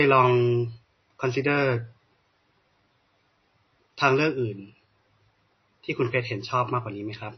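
From start to finish the speech sounds dull and watery, with nothing above 6 kHz, a swirling, unstable texture around the sibilants and softened consonant attacks. This is likely MP3 compression at a very low bitrate, around 24 kbps. Short of bits, the encoder cuts off the treble at a fixed frequency and drops quieter frequency components, which flicker in and out from frame to frame and leave plainly audible codec damage.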